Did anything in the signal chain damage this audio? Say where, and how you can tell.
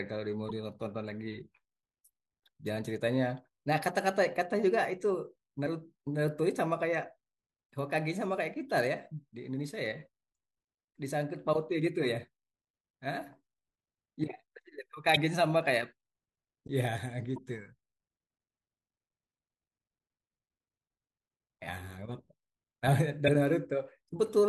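Yes. The compressed stream was corrupted, which points to the codec or storage stage: damaged data in a compressed stream at 0.47 to 0.51 s, 5.63 to 5.67 s, 15.13 to 15.17 s, 17.34 to 17.38 s and 23.25 to 23.29 s. Each time, the decoder hits bad bytes, misreads the frame and loses sync until it finds the next valid header. In the speech, each event is a brief chirp, squawk, click or short hole of about 40 ms.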